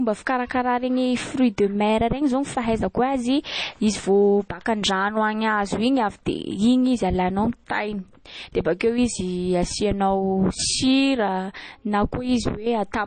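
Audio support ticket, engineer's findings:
Speech band-limited throughout, nothing above 9 kHz; sibilants dull, watery swirl, smeared attacks, plainly audible. Likely MP3 compression at a very low bitrate, consistent with about 32 kbps: encoder dropping treble at a fixed cut-off and zeroing weak frequency lines that flicker frame to frame, smearing transients.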